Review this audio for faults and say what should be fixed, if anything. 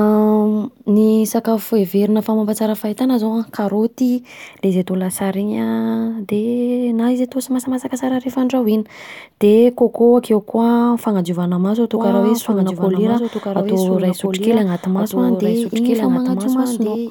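From 11.95 s to the end there's a doubled audio track: a second copy of the speech cuts in abruptly, about 5 dB below the original and trailing it by around a second and a half, with no reverb tail or room colour. It runs right to the end. The likely cause is the same signal getting captured twice, through a slower second route or an edit that left two offset copies stacked. Fix it by removing the duplicate from 11.95 s on, and check the routing and edit timeline so each source only reaches the mix once.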